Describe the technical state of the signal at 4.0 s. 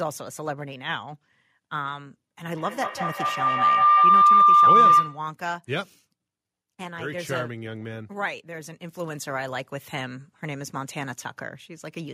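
A feedback howl, from 2.56 to 5.32 s: a microphone-to-loudspeaker loop gains level each trip, building a tone near 1 kHz, with the loop repeating every fifth of a second, about 14 dB above the speech.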